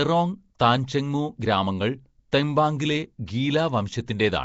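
A speech recording likely passed through Nellymoser compression, the old Flash microphone codec, whose rigid bit budget drops weak bands and fills them with noise. The damage is plainly audible throughout: a rough, hissy halo and a smeared, underwater quality, with nothing above 7.7 kHz, which fits a rate near 32 kbps. At 2.32 s there is pre-echo. The block transform spread its quantisation noise backwards ahead of a sharp attack, so a brief hiss of about 11 ms precedes it and the onset sounds softened.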